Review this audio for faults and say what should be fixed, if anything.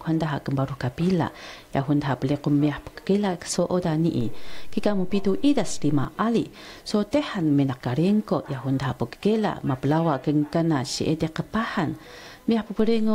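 Low thumps land at 4.21 s and 6.05 s, and again at 12.79 s. These are DC steps: the waveform's zero line jumps by about -26 dBFS, holds, and snaps back at 6.05 s; the second offset persists to the end. Fix with a high-pass filter, and keep the converter from recalibrating mid-recording.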